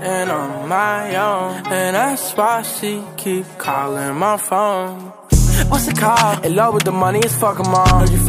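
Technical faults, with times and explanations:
No technical faults can be heard anywhere in this audio. Nothing in it calls for a time or an explanation.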